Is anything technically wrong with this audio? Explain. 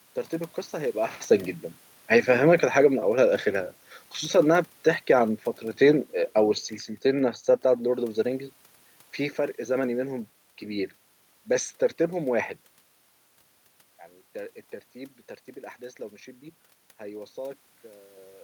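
Yes. From 4.37 to 8.14 s, automatic gain falling: the gain control judged the input too loud or its background noise too strong and eased its gain down by about 4 dB, so the speech and the room noise sink together. That shared drop separates it from the talker moving, as around 1 s and 12.5 s, where only the voice changes.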